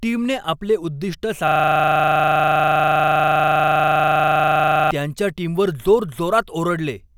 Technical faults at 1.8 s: system hang loop

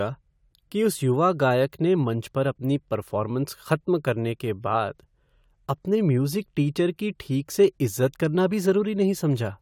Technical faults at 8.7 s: none

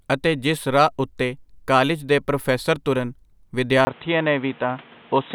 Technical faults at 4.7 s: input switched to a poorer device

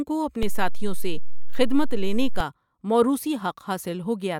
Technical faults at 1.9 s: DC step

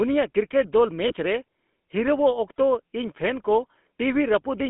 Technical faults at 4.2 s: GSM full-rate codec

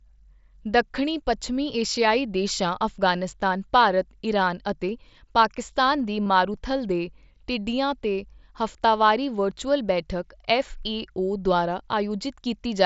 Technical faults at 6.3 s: concealed Bluetooth headset packet loss

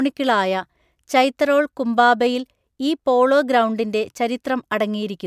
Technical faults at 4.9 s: none

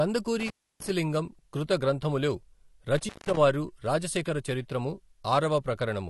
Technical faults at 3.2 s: AAC compression; intermittent contact

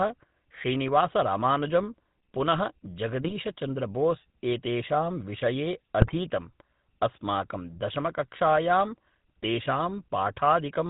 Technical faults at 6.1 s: GSM full-rate codec; GSM bit errors

